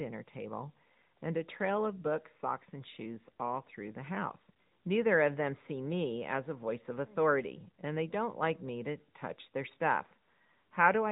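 Throughout, the speech sounds thin and buzzy, with nothing above 3.8 kHz: AMR narrowband mobile codec compression, whose plainly audible damage fits a mid-rate mode near 10 kbps.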